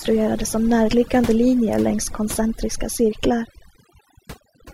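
Across the whole recording, overdone noise removal is at work: a noise reduction stage was set far too aggressively for a noisy source, so it pushes individual frequency bands down hard, or mutes them outright, whenever their level sits close to its noise estimate. Softer components of the speech fall below that threshold and vanish along with the noise. The gaps sound almost silent yet sprinkled with twinkling specks.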